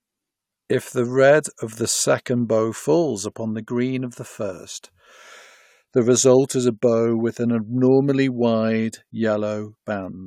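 No technical faults can be heard anywhere in the recording; the signal stays steady and intact throughout the speech.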